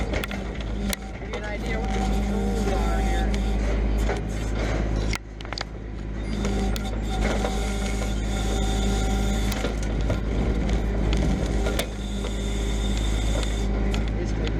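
Integer overflow cracks at 0.24, 0.93, 5.16, 6.76, 9.52 and 11.8 s: at each of these loud peaks the sample value ran past the largest integer the signal path could hold, and instead of being held at the limit it wrapped around to the opposite extreme. The peaks were pushed only about 0 to 2 dB too far, yet each one jumps across the full range, giving a violent snap far harsher than clipping.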